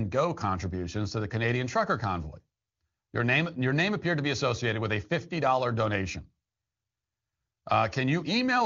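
Speech over the AMR wideband (HD Voice) codec, whose clarity fits its top 23.85 kbit/s mode, with no technical faults found.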